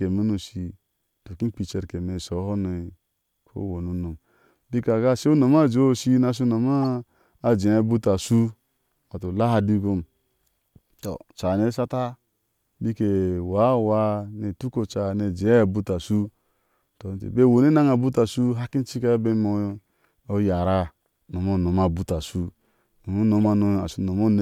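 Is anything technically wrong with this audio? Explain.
Yes. Corrupt frames were decoded at 1.65–1.73 s, 6.82–6.84 s and 23.45 s. Flipped bits put energy at the wrong frequencies, so each event is a brief chirp or noise burst rather than the silent gap of a dropout.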